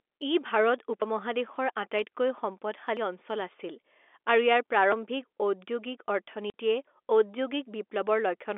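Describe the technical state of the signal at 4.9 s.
At 4.92 s the speech skips forward, with roughly a twentieth of a second missing and the two sides butted together without a gap. The likely cause is audio missing between chunks, lost while one block closed and the next opened, which fits 2-second chunks.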